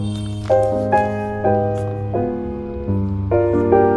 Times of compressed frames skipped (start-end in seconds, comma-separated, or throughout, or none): none